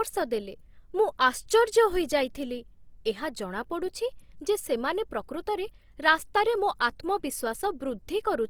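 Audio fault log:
throughout Opus compression: the speech sounds grainy and rough, with a noisy texture on sustained sounds, yet content still reaches about 20.2 kHz. This is likely Opus in its music mode at a low rate near 24 kbps, filling bit-starved bands with folded or noise-like energy.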